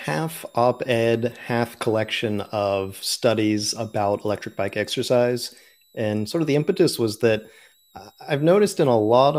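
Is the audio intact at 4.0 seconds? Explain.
No. At 4.0 seconds, as across the whole speech clip, a switching supply whistle sits faintly beneath the sound, about 40 dB down. A power converter cycling in the audible range puts a high tone near 4 kHz that wanders between 3.6 and 4.1 kHz, unlike steady low-pitched mains hum.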